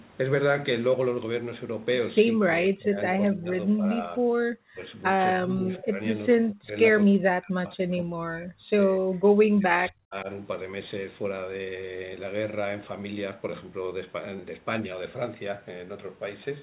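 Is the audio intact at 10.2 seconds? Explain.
No, speech suppressed in double talk runs from 9.54 to 10.28 s, so 10.2 s falls inside it. The speech drops away, by about 40 dB at its deepest, and is turned down for a total of around half a second. The likely cause is an echo canceller that heard both ends talking at once and, unable to tell the near talker from loudspeaker echo, attenuated both.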